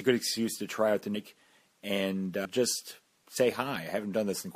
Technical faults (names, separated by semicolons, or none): compressed frames skipped